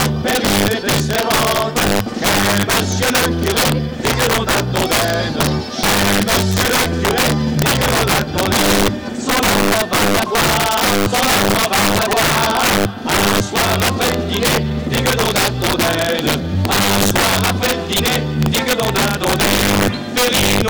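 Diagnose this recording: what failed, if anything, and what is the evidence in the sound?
What failed is an integer overflow, most likely in the sample-format conversion or a fixed-point gain stage. Across the whole recording, loud moments don't flatten the way clipping does. They snap into harsh, violent cracks. The signal looks to be pushed about 7 dB too hot, so a few percent of samples overshoot the integer ceiling. Each one wraps straight to the opposite extreme instead of being clamped, throwing a full-scale jump into the waveform.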